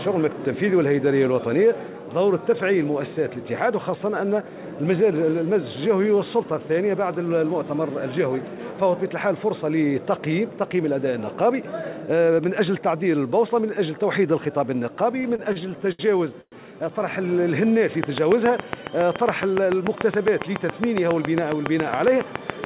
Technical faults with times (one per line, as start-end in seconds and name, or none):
15.22-16.01 repeated stalls (stutter)
16.41-16.54 call audio freeze
18.04-22.65 train of clicks